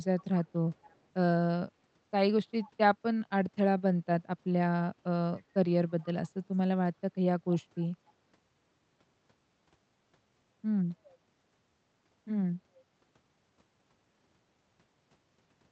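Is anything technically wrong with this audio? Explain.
Yes. There is an echo leak in six short places: 0.03 to 0.49 s, 0.74 to 0.99 s, 5.37 s, 6.01 s, 7.79 s and 8.07 s. A faint copy of the speech returns about 0.28 s behind the original, roughly 25 to 40 dB down. It is likely a loudspeaker's output reaching a microphone and slipping past echo cancellation. It sounds like a ghost trailing the speech. On a spectrogram it shows as weak, offset repeats of the speech harmonics, and on a waveform as low ripples after the syllables.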